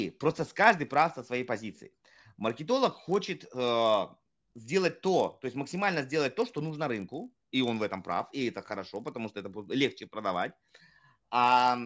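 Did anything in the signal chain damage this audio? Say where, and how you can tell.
Yes. The damage is at the sample-rate conversion stage, which points to a 44.1 kHz to 16 kHz conversion. A resampler restarted on every block leaves a 50 Hz buzz under the speech throughout, heard only while there is signal. Each 20 ms block was converted alone, so every edge carries a small error.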